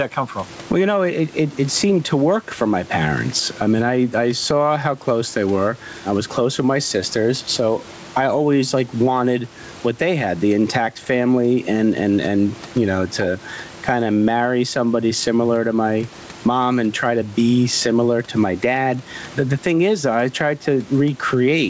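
Throughout the speech, the level pumps with a swing of around 15 dB, leaving loud and soft passages squashed together. This gain pumping is likely from input gain set far too high, with a fast limiter or compressor clamping down on each peak.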